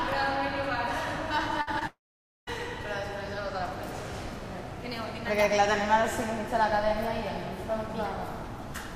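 From 1.61 to 1.69 s there is a burst of packet loss. Several consecutive packets failed to arrive in time, so the receiver extended the last sound for about 55 ms and faded it. This is heard as a brief held buzz or hiss, after which about 60 ms of audio is missing.

Between 1.79 and 1.83 s, short concealed packet loss occurs. About 20 ms of data missed the decoder, and the receiver synthesised roughly 18 ms from the preceding sound, then crossfaded back into the real audio. The result is a tiny smear or wobble.

From 1.87 to 2.49 s the sound carries on as a fading continuation for a moment, then drops to silence for about half a second before resuming further on, with about 0.6 s of audio missing. This is likely a long network dropout, where nothing arrived until the stream came back.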